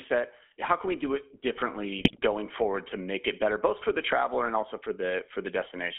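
Speech runs through a narrow, buzzy, gravelly channel for the whole clip. Nothing comes through below about 250 Hz or above 3.4 kHz, and the voice has a coarse, rasping texture. That is the sound of the GSM full-rate codec, which fits its 13 kbps rate. It rebuilds speech from a vocal-tract filter driven by a sparse, regularly spaced pulse excitation, so the fine detail between pulses is lost and the roughness stays plainly audible throughout. From 1.98 to 2.19 s, between "can we do it" and "going forward to make", the audio breaks into squawks, pops and gargling. These are GSM bit errors: corrupted bits reached the decoder and scrambled its filter, pitch and gain values, so the spectrum warps and the level jumps from frame to frame. The length of the disturbance fits roughly ten damaged 20 ms frames at an error rate of about 4.5 percent.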